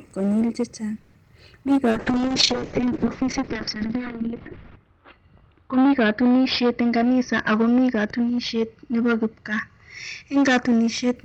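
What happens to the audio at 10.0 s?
At 10.0 s the clip is inside a call bitrate drop running from 1.91 to 11.22 s. The encoder falls from 32 to 7 kbps and its bandwidth narrows from 20 kHz to 6 kHz, so the speech sounds coarse and muffled. Hard clipping is also present throughout. The signal is driven about 15 dB past full scale, and roughly 15% of the samples are flattened, adding a harsh fuzz to every loud sound.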